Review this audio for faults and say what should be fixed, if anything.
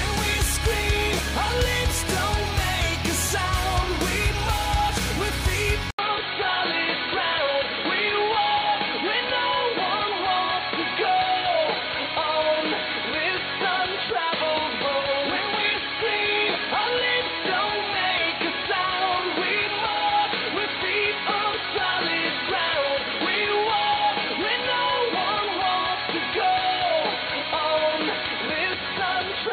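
At 5.91 s the sound drops out for about 80 ms, then returns duller and boxier through to the end, with nothing above 4.4 kHz, a faint new background noise roughly 40 dB down, and no real change in level. The likely cause is the input switched to a poorer device mid-recording, such as another microphone or a headset's call profile, whose narrower band, different tone and own noise replace the original path at that moment. To prevent it, lock the recording input to a fixed device and disable automatic device or profile switching before recording.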